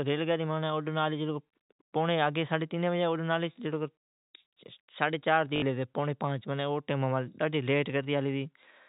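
Speech over G.711 telephone coding, band-limited below 4 kHz, carries packet loss with the last packet repeated from 5.56 to 5.62 s: a 60 ms robotic stutter buzzing near 50 Hz, fitting 20 ms packets. Unlike a silent dropout, the gap is filled with repeats of the last packet.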